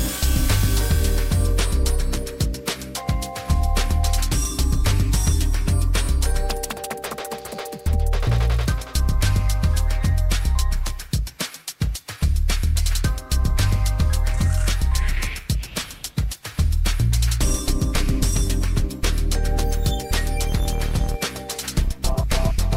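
No audible technical faults.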